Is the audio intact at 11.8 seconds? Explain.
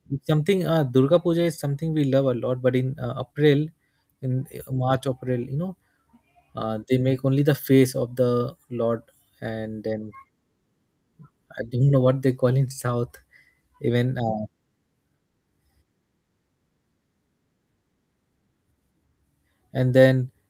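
Yes, at 11.8 seconds the speech runs through intact, with no dropout, click, distortion or other fault at that point.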